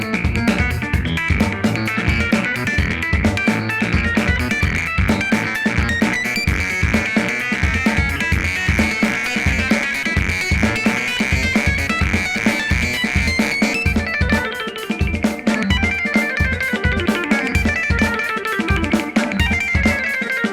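No technical faults can be heard anywhere in the recording. There are no breaks, glitches or interruptions at any point.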